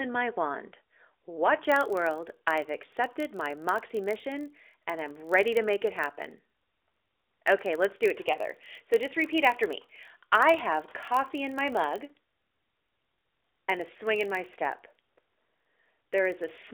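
From 1.62 s until the end of the clip, a steady low buzz at 43.1 Hz sits under the speech. It comes from a block size mismatch (padded). One stage hands over blocks slightly shorter than the next stage reads, which fits a 1024-sample read block, and the shortfall is filled with zeros. That tiny silent gap repeats once per block and creates the buzz. Because the padding is so small, the speech runs only about 0.1% slow (0.999 times normal speed). The speech sits in the narrowband phone band, roughly 300 Hz to 3.6 kHz with nothing above 4 kHz.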